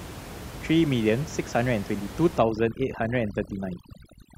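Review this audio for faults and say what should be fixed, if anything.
From 2.38 s to the end, overdone noise removal pulls down any band near the noise estimate. The room noise, about 14 dB below the speech, collapses into twinkling specks. Unlike codec artefacts, it begins at 2.38 s and empties the background rather than smearing everything. Set the noise reduction to a gentler strength so it only lowers the room noise instead of gating it away.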